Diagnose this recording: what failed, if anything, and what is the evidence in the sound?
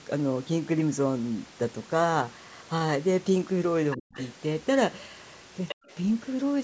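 The echo canceller in the call processing is the stage that slipped. There's other side's voice leaking through in three short scraps, at 3.91–3.97 s, 4.14–4.24 s and 5.68–5.75 s, sitting somewhere around 10 to 20 dB under the talker, the loudest one near the end. Those are brief fragments of a second voice, most likely loudspeaker playback that the canceller didn't fully subtract from the mic before sending it on.

Right between the first two scraps you get speech suppressed in double talk, from 3.96 to 4.16 s. The talker's voice gets pushed down very hard, close to gone, for about a fifth of a second while the far end is active. That points to the canceller likely being unable to tell the local talker from the echo during overlap and attenuating everything to be safe.

Then there's background gated by the echo canceller at 5.75–5.89 s, immediately after the last leak. The room tone drops by about 40 dB for around 150 ms and then comes back as the suppressor releases. 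It's the canceller clamping the mic while the loudspeaker plays, and the room noise gets cut along with the echo. The band-limiting to 8 kHz from the call mic chain is just the normal path.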